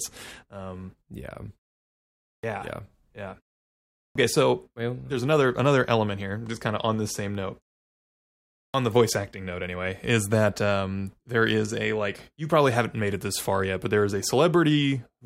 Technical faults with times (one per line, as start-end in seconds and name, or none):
2.39-2.43 clipped start after a pause
4.11-4.15 clipped start after a pause
8.70-8.74 clipped start after a pause